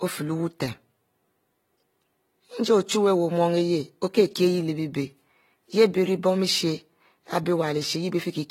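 Throughout the speech, AAC compression damage is plainly audible: dull, smeared sound with fizzy sibilants, nothing above 16.6 kHz. A low-bitrate AAC-LC encode, around 24 kbps, is the likely cause.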